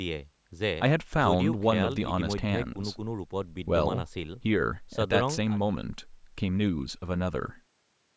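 Speech, with no technical faults to be heard.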